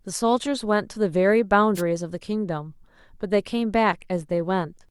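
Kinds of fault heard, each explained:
Wireless microphone noise hit: the analogue FM radio link from the microphone briefly lost signal strength as reflected paths cancelled the direct one, so the receiver's own noise rose up through the audio instead of being suppressed. In this speech clip it comes through as a brief swish of static from about 1.75 to 1.82 s, roughly 76 ms, before the signal recovers and the noise drops away.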